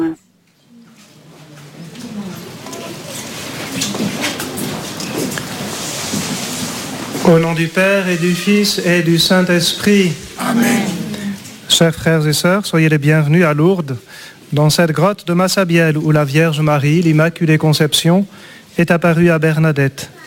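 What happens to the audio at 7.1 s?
At 7.1 s the audio carries a crude rate conversion that spans the whole clip. The gritty, inharmonic fizz, roughly 25 dB below the sound, fits a conversion from 44.1 kHz to 48 kHz done by repeating nearest samples without filtering, and it follows loud and high sounds.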